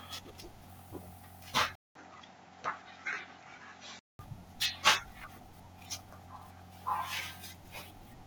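At 1.75 s the speech drops out for about 0.2 s, then comes back dull and boxy, with nothing above 7.6 kHz, a level shift of a few dB and new background noise sitting well under the voice. That's the input switched to a poorer device, likely the recording jumping to a narrower-band mic or a headset's call profile. At 4.19 s the original input returns and the full top end comes back.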